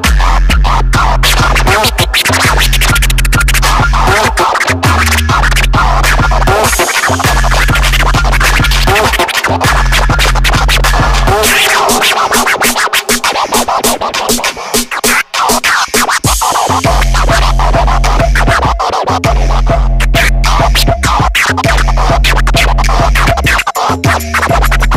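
Hard clipping runs the whole way through: driven about 14 dB past full scale, nearly a third of it gets flattened, so every loud moment turns harsh and fuzzy.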